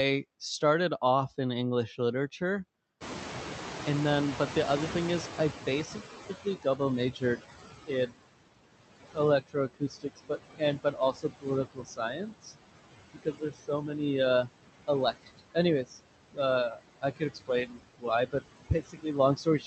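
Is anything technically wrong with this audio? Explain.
Yes. The noise suppressor leaves artifacts throughout, lags behind a sudden jump in room noise, and repeatedly turns down parts of the speech.

Noise suppressor artifacts run through the whole clip. The suppressor cuts whatever it judges to be steady noise by about 19 dB, band by band and frame by frame. So the background sinks in the gaps and swells back under the speech.

The noise suppressor is catching up from 3.0 to 7.41 s. At 3.0 s the room noise jumps by about 23 dB. The suppressor's noise estimate takes about 4.4 s to follow. During that time the louder noise passes with only about 15 dB of reduction. You hear it come through more at first, then gradually sink as the estimate adapts.

Speech is cut by the noise suppressor at 6.29–6.8, 7.12–7.43, 7.86–8.23, 8.83–12.53, 13.14–13.96, 14.87–15.99 s, and from 16.7 s to the end. 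The raised noise sits only about 11 dB below the speech. That makes soft parts of the speech easy to mistake for noise. They get pulled down with it, by about 15 to 21 dB. Word endings and quiet stretches sound swallowed or faint. The longest stretch is 8.83–12.53 s, with about one and a half seconds affected.

The room noise itself belongs to the recording. The Opus call path stops at 8 kHz, and its coding noise fits a bitrate of around 32 kbps.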